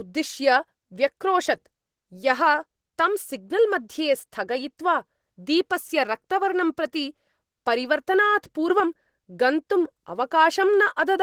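Throughout the speech, Opus voice compression is plainly audible as a hoarse, slightly robotic texture. The sound fits a hybrid SILK and CELT mode at roughly 16 kbps.

At 8.7 to 8.8 s, a sudden gain jump of about 4 dB lifts speech and background together, likely from a gain change applied without a ramp.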